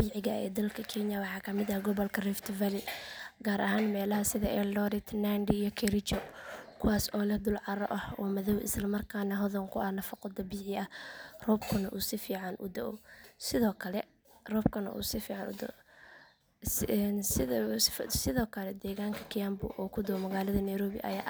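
No technical faults are audible anywhere in the speech recording.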